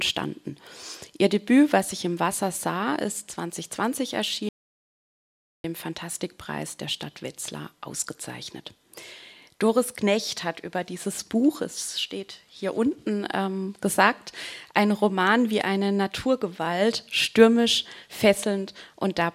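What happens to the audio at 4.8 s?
The input feeding the recorder was most likely interrupted, whether by a device dropping out, a broken link or an accidental mute, while writing carried on with silence. The result is an audio dropout to silence from 4.49 s to 5.64 s, so 4.8 s falls inside it. The sound stops abruptly mid-flow and resumes just as abruptly, and the gap of about 1.15 s is dead silence with no room tone. Whatever occurred during that stretch is lost.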